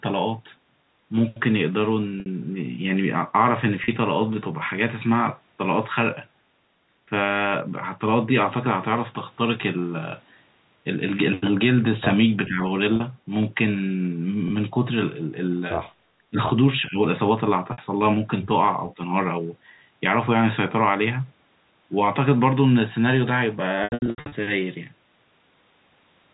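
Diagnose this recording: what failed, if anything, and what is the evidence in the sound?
Network packet loss with pitch repetition: lost packets were bridged by repeating the last pitch period, giving brief buzzy, held sounds at 2.2, 3.84, 12.96, 14.48 and 17.72 s, and a choppy, fading stretch from 23.84 to 24.32 s.

Call processing, likely echo cancellation suppressing speech in double talk: the speech dips by roughly 10 to 20 dB for a fraction of a second at 12.46, 16.18 and 16.88 s.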